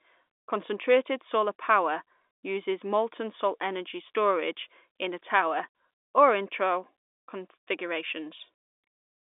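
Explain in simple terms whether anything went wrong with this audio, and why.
Nothing went wrong with this audio; it is ordinary speech carried over a telephone line, and the line itself is working as it should.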